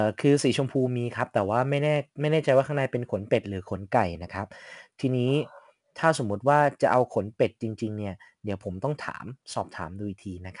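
From start to finish the speech carries the grit of 4-bit ADPCM compression. Each sample is coded as a coarse 4-bit step away from a predicted value, so a noise floor rides along under the signal and swells with it: louder syllables get a rough hiss, and sharp onsets smear where the step size can't keep up. The damage is plainly audible. Nothing comes through above 10.6 kHz, which fits a stream of around 89 kbps.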